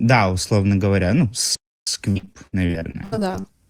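Speech, with a playback stall from 1.55 to 1.87 s: the sound stops dead for about 320 ms, most likely because the player's buffer ran dry or its thread was blocked. A single clean silence like this is what separates it from packet loss. From 2.11 to 3.46 s, repeated packet loss gives a choppy texture. Around fifteen short holes, the longest 76 ms, are patched by stretching the preceding sound, so about a third of that stretch is concealment rather than real signal.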